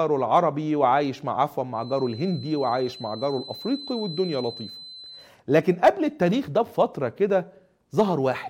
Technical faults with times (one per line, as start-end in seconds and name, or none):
1.70-5.32 feedback whistle